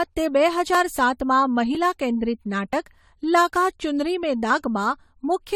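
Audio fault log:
Throughout, generation loss: the speech sounds swirly, hollow and smeared, with softened consonant attacks and nothing above 19.2 kHz. This likely comes from around five rounds of lossy encoding, consistent with AAC-LC near 64 kbit/s, each pass requantising on a shifted frame grid.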